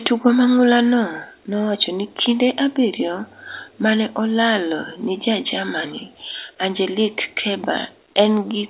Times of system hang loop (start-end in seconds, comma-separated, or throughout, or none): none